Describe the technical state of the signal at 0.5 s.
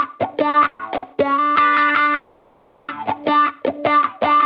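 At 0.5 s there's a short stall from a late packet, 0.49 to 0.55 s: the jitter buffer ran dry, so the last bit of sound gets held about 40 ms with a slight buzz or dip, then carries on with nothing lost, just 40 ms later.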